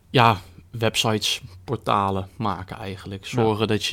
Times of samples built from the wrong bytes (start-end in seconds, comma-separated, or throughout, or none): none